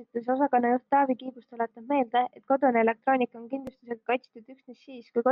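Nothing in this bit of speech trips any alarm; there are no faults to point to at any moment along the way.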